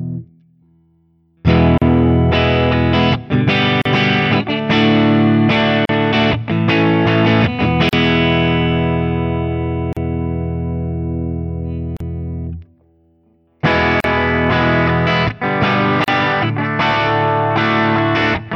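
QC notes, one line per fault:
1.78–16.08 s, gap at a join of encoded pieces: 38 ms gaps at 1.78, 3.82, 5.85, 7.89, 9.93, 11.97, 14.00 and 16.04 s, every 2 s. Untrimmed encoder start delay and end padding at each joined segment; smeared edges, then sound resumes.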